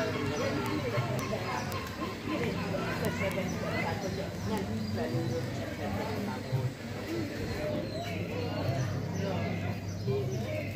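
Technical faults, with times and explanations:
0.13 s to 10.74 s, word clock ticks: a steady train of sharp clicks of uneven strength, one roughly every 70 ms, around 150 in all. The receiving clock isn't locked to the sender's and drifts by roughly 300 parts per million. At each slip a single sample is dropped or repeated.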